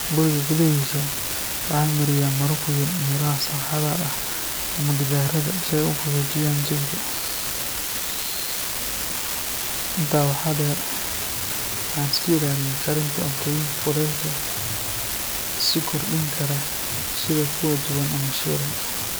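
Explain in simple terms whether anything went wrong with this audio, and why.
Yes, something went wrong: an unreliable data bit. One of the lines carrying the digital sound is flaky, so one bit comes out wrong at random moments, each time adding an identical spike. Across the whole clip this gives a steady crackle that continues even in pauses between speech.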